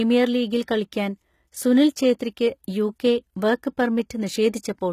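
A speech recording that has likely passed through HE-AAC compression at a very low rate, consistent with about 20 kbps, so its treble is rebuilt from copied lower bands rather than coded. Throughout, s sounds come out gritty and lispy, and nothing remains above 14.9 kHz.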